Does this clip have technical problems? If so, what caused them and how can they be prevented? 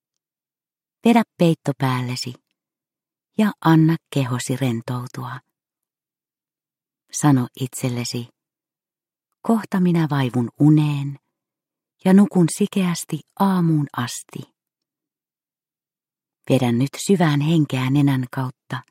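No, nothing audible in the clip points to a technical fault, so there is nothing here that needs a cause traced or a fix applied.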